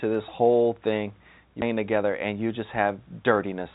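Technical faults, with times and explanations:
1.62–1.64 s, skip ahead: playback jumps forward with no filler, losing roughly 0.7 s of sound. The jitter buffer discarded audio that was already queued, so the two sides of the cut join almost directly. This points to an overflowing buffer shedding backlog.
1.72–3.72 s, jitter buffer speed-up: the sound runs about 8% fast at unchanged pitch, sounding hurried. The buffer held excess audio after the jump and repeatedly removed short pitch-period pieces, roughly 150 ms in total, to bring its delay down. Band-limiting to 4 kHz fits a G.711 mu-law call codec.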